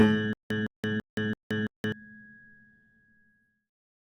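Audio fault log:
0.33 to 1.92 s, stutter with silent gaps. A short burst of about 161 ms plays, then cuts to dead digital silence for about 173 ms. The same burst returns five times at a steady 334 ms period. The evenness gives it a mechanical, skipping feel. The likely cause is a stalled player or stream that replays its last fragment at each retry and then runs empty. Whatever sound belonged in those gaps never plays.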